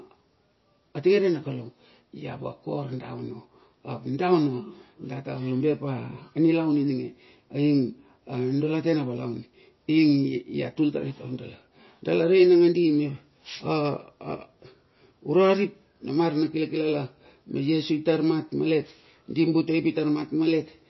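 From start to finish the speech sounds watery and swirly, with a hard ceiling on the treble: nothing reaches above 5.8 kHz, so s sounds lose their edge and attacks smear. The likely cause is heavy MP3 compression, consistent with a bitrate of about 24 kbps, where the encoder runs short of bits, cuts the top band and lets weak frequency lines flicker on and off. A spectrogram would show a flat shelf at 5.8 kHz and patchy, blocky holes below it.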